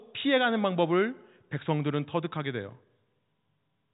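Nothing goes wrong anywhere in this bit of speech, which simply carries the usual narrow sound of G.711 telephone coding, with nothing coming through above about 3.8 kHz.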